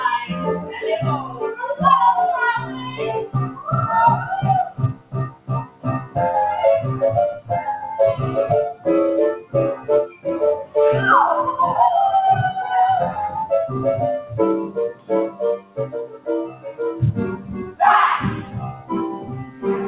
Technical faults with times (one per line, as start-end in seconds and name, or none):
0.00-19.87 noise suppressor applied to music or sounds
0.62-1.43 sound cut by the noise suppressor
2.65-3.67 sound cut by the noise suppressor
4.68-6.16 sound cut by the noise suppressor
7.36-7.51 sound cut by the noise suppressor
9.41-10.76 sound cut by the noise suppressor
14.21-17.80 sound cut by the noise suppressor
18.40-19.65 sound cut by the noise suppressor